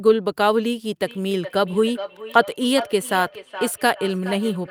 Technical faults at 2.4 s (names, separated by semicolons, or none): feedback echo between two devices